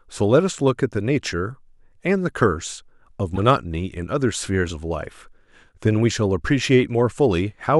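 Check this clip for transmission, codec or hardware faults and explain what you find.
One codec fault in this speech. At 3.35 to 3.39 s there's a corrupt frame decoded: a couple of damaged frames got played anyway, throwing energy to wrong frequencies as a chirp, squeak, blip or burst of noise peaking around -15 dBFS.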